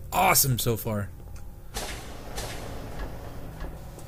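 At 2.27 s a doubled audio track appears and runs to the end. A second, full-band copy trails the original by about 0.7 s, at roughly the same level. It enters abruptly, with no decay or room colour. A second capture path running late is the likely cause.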